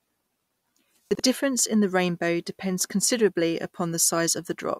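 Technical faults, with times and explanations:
1.11–1.20 s, chunks out of order: a 43 ms chunk plays one slot late, a jumbled moment before "difference in the rainbow"; unlike a dropout, nothing is lost.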